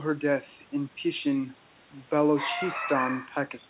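The speech comes through intact and without faults, carried over a telephone-band call path that leaves nothing above 4 kHz, with room noise sitting about 32 dB below the voice.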